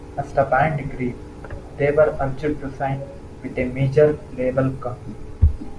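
No technical faults can be heard anywhere in the recording.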